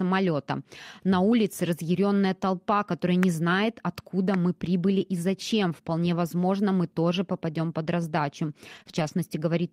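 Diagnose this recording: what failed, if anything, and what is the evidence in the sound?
A voltage step, likely from a plug, switch or static in the analogue wiring, adds a loud pop at 3.23 s and 4.34 s, each about 15 dB above the speech, which continues underneath.

Network packets were lost but rebuilt from the in-band error-correction copies the codec carries, so there is no gap. The speech turns rougher and noisier from 8.75 to 8.81 s and from 8.87 to 9.09 s.

A short concealed packet loss: about 20 ms each time never arrived, and the decoder extended the preceding sound to cover it, leaving brief smears at 8.83 to 8.87 s and 8.91 to 8.94 s.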